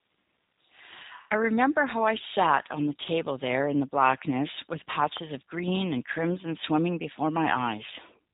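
From the start, the whole clip carries the sound of the G.729 codec. Nothing gets through above about 3.8 kHz, so the speech is boxed in and dull, and the codec damage is easy to hear: a rough, slightly synthetic grain, which fits an 8 kbit/s codec rebuilding each 10 ms frame from a vocal tract filter, a pitch predictor and a handful of pulses rather than sending the actual waveform.

At 4.99 s there's a loud pop, actually two sharp pops in quick succession running to about 5.19 s. They jump out a few dB above the speech, which keeps going underneath without a break. The likely cause is a brief voltage spike from a plug, a switch or static being dumped into the signal path, with the circuitry after it shaping each spike into that hard click.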